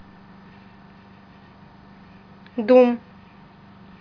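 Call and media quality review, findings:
Nothing turned up on this speech clip, so there's no fault to log here.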